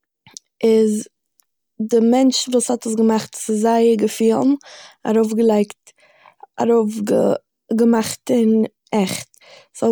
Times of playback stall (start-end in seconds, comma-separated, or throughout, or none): none